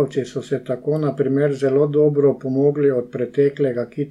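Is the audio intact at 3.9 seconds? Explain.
Yes, the audio is intact at 3.9 seconds, with no fault audible at that moment.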